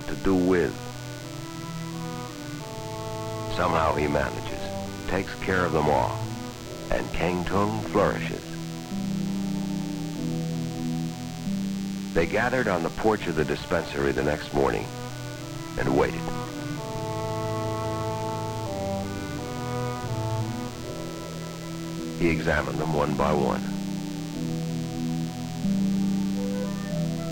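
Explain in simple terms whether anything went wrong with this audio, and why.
A thin, steady buzz sits under the sound for the whole clip, quiet but never letting up. This is DECT cordless phone buzz: a nearby cordless phone or its base sends a radio pulse 100 times a second, and the audio circuitry turns those pulses into a hum.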